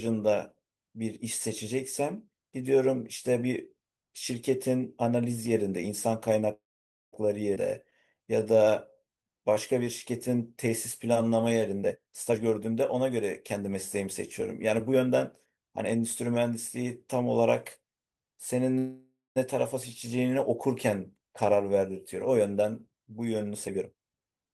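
From 6.53 to 7.15 s the speech stops: a brief buzz or hiss continuing the last sound fades, then about 0.52 s of silence, before the speech resumes where it left off. This is a call audio freeze, about 0.59 s long, likely caused by packets held up in transit until the jitter buffer ran dry. The receiver stretched the final sound to fill the wait, so the gap was inserted without losing any speech.

At 7.55 to 7.58 s the speech jumps forward with almost no gap, and roughly a fifth of a second is gone, the two sides butted together. This skip ahead means a stretch of audio was discarded while later audio was already queued.

From 8.14 to 9.85 s the speech drags at about 88% of normal speed with unchanged pitch, its sounds drawn out. This is a jitter buffer slow-down. To build up a reserve, the receiver repeated single pitch periods or bits of pauses over and over, adding about 0.21 s in total.

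From 11.82 to 15.56 s the speech runs hurried at about 115% speed, pitch intact. In this jitter buffer speed-up, the receiver was holding more audio than its target and clipped out short pitch-period pieces in succession, removing around half a second.

From 18.78 to 19.38 s a second call audio freeze occurs: a fading continuation, about 0.2 s of silence, then resumption with nothing missing. The stall lasts about 0.58 s and is likely again packets delayed until the buffer emptied.

From 23.52 s to the end, a further jitter buffer speed-up rushes the speech at about 139% speed, cutting roughly 0.4 s of audio to work off the excess delay.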